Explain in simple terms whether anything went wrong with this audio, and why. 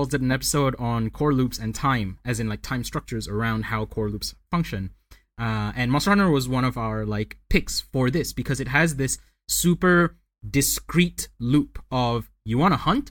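Listening through the recording, nothing stood out as having gone wrong.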